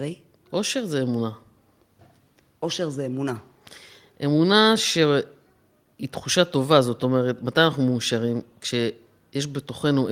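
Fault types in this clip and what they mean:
No faults are audible.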